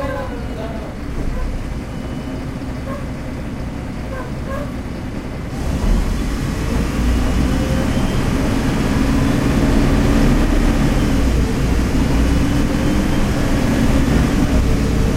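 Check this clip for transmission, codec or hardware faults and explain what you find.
Sample clock jitter runs through the whole clip. The converter's clock wanders by around 7 microseconds, so each sample lands slightly early or late, and the error grows with the waveform's slope, sitting roughly 35 dB below the signal. It sounds like a hiss that swells with loud, bright passages and disappears in silence. On a spectrogram it shows as a broadband haze that tracks loud, high-frequency moments. On a waveform it is invisible at normal zoom.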